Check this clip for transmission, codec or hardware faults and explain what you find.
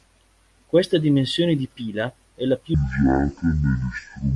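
One fault is present. From 2.74 s to 4.35 s, right after "pila è la più", there is a wrong sample rate. Playback runs at half speed, so the speech drops a full octave and drags, consistent with 48 kHz audio played at 24 kHz.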